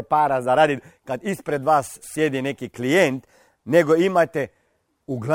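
Crude rate conversion affects this speech clip from 0.76 s to the end at 5.3 s. The sound points to a 48 kHz to 44.1 kHz change made by picking the nearest sample without filtering. Its repeating error adds a gritty, inharmonic fizz, roughly 30 dB below the speech, that tracks louder and brighter sounds.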